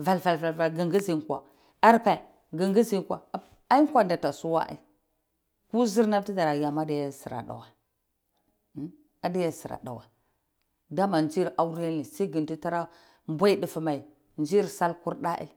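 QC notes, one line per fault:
0.99–1.01 s, loud pop: a single sharp pop about 10 dB above the speech, which carries on underneath. It is likely a brief voltage pulse such as a switch or static discharge. On the waveform it appears as a narrow spike, and on the spectrogram as a thin vertical broadband line.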